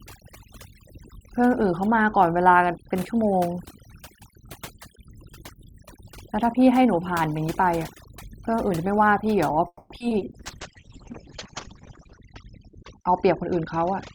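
Right from the start there's overdone noise removal: the denoiser was pushed too hard, so the background drops and breaks up into twinkly specks. At 9.67 s you get what's likely a call audio freeze, with packets held up and the jitter buffer running dry. The last sound hangs on as a fading buzz, dips to silence for about 50 ms, and then the speech resumes at 9.92 s without losing anything, just 230 ms later. Right after that come short bursts of concealed packet loss at 9.98 to 10.14 s, 10.09 to 10.13 s and 10.19 to 10.23 s. Each one is about 20 ms that never arrived and got patched over, and you hear them as quick smears or wobbles. From 10.39 s to the end there's a call bitrate drop. The top end gets cut off around 8 kHz and the sound turns rough and muffled, which fits the encoder falling from full-band quality down to something near 7 kbps. Finally, from 13.11 to 13.93 s, a jitter buffer speed-up trims pitch-period slices, about a twentieth of a second in total. 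That makes the speech run roughly 6% faster at the same pitch, so it sounds a little hurried.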